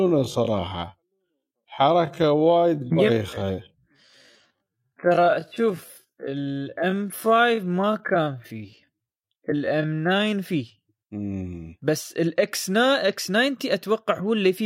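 A time-stretched section runs from 0.00 to 10.26 s of this speech clip, where the pace drops to about 0.59 times normal speed while the pitch stays where it was. The slowing most likely comes from software fitting the passage to a longer duration by repeating short fragments of the waveform rather than resampling, which is why the speech sounds drawn out before the pace jumps back to normal after 10.26 s.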